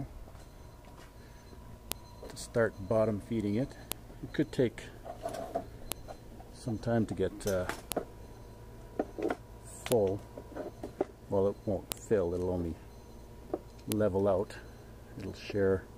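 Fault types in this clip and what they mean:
File header played as audio: uncut WAV headers between 2-second pieces play as data, giving a sharp snap at each join, 1.92 to 13.92 s.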